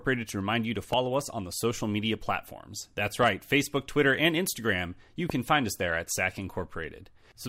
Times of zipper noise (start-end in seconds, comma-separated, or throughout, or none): none